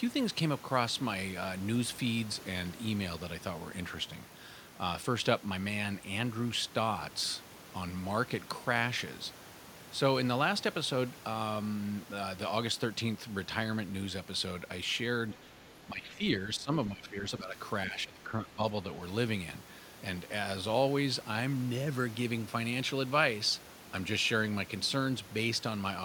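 Right around 15.35 to 15.45 s, and again at 15.63 to 15.7 s, you get faint scraps of the other side's voice leaking through, sitting something like 30 dB or more under the main speech. They're short, just little ghosts behind the talker. The likely cause is the far end playing out of a loudspeaker and the echo canceller not scrubbing all of it from the mic.

Straight after that comes speech suppressed in double talk. From 15.87 to 16.23 s, 16.44 to 16.73 s, 16.89 to 17.56 s and 17.86 to 18.62 s the talker's level keeps sagging, by around 10 dB in the first three stretches and closer to 15 dB in the last. It sounds like the voice is being pushed back and ducked in pieces. Both ends were probably talking at once, and the canceller, unable to tell its own talker from the echo, clamped down on everything.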